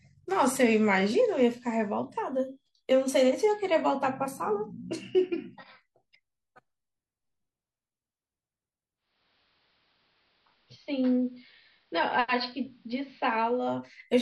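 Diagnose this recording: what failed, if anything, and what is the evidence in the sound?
Receiver fault: digital radio blending to analogue. From 8.95 to 13.80 s, AM takes over. About 2 dB quieter, faint hiss.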